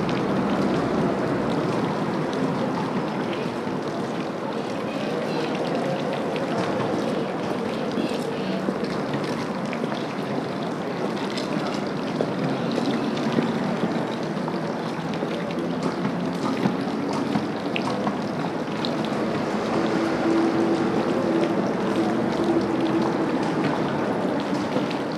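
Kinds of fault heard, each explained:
Train of clicks: From 5.22 to 9.70 s, about six near-identical pulses per second, irregularly spaced, sit on top of the sound as popping, some 30 in all, peaking a few dB above the programme, likely from interference or a faulty connection.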